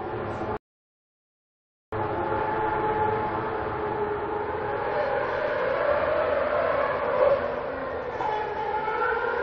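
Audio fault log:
0.57–1.92 s rebuffering stall: playback ran out of buffered audio and went silent for 1.35 s, then resumed exactly where it stopped, with nothing lost.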